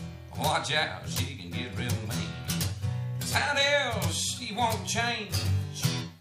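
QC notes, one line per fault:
Nothing stood out on listening, and there is no fault to note for this clip.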